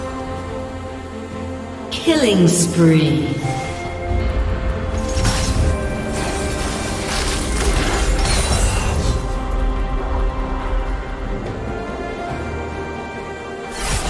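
From the start to the end, a steady tick runs under the sound ten times a second. This is a resampler restarted on every block. The rate change, which fits a conversion from 48 kHz down to 24 kHz, was done on 100 ms blocks in isolation. At each block edge the converter lacked the real neighbouring samples. That leaves a small error every 100 ms. It is heard as regular clicks only while sound is present.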